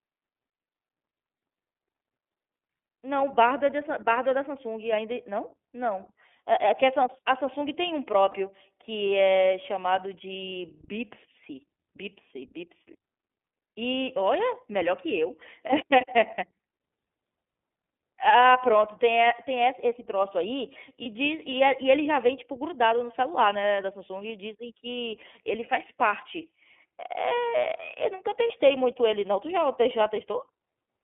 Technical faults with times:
0.00-31.03 iLBC codec
8.31-8.34 lost iLBC frames
21.02-21.06 lost iLBC frames
28.47-28.54 lost iLBC frames

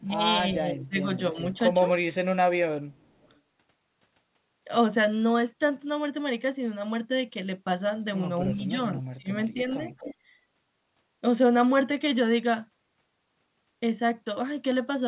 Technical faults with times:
0.00-0.21 speech suppressed in double talk
0.70-1.06 speech suppressed in double talk
1.33-1.38 speech suppressed in double talk
2.93-3.40 echo leak
8.53-9.29 speech suppressed in double talk
9.91-10.15 echo leak

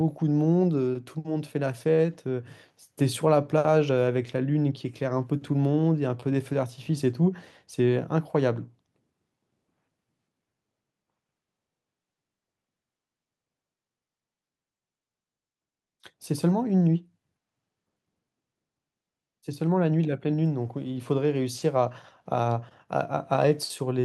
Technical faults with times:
none

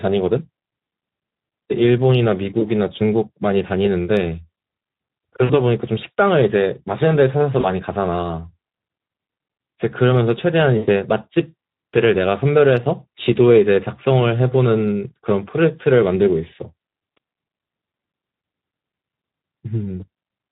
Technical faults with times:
0.00-20.52 Speex codec
7.59-7.66 VoIP packet loss concealed by the speech codec
10.77-10.89 VoIP packet loss concealed by the speech codec

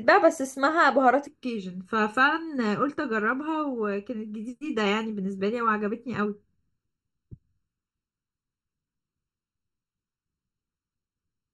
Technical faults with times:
1.27-11.53 channel delay (comb filtering)

